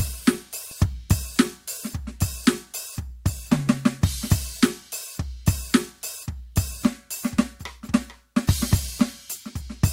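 No technical faults can be heard in this music clip. There is nothing in it that needs a timestamp or a repair note.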